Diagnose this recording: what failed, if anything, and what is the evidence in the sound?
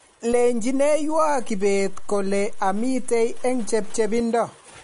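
Throughout the recording the speech sounds watery and swirly, with sibilants turning metallic and chirpy and consonant attacks smeared. There is nothing at all above 10.6 kHz, a hard ceiling rather than a natural roll-off. This points to the codec stage, most likely MP3 compression at a starved bitrate, which fits roughly 40 kbps. The encoder cut the treble at a fixed frequency and dropped weak spectral lines that flicker between frames, producing the plainly audible swirl.

A low thump at 0.33 s and another at 4.20 s bracket a stretch where the speech itself carries on unchanged. This is a DC step at the converter or analogue input stage. The waveform's zero line jumps at 0.33 s, as happens when a converter recalibrates or an input carrying an offset is switched in. The offset holds until 4.20 s, then steps back. Each abrupt shift is heard as a thump, not as a change in the speech.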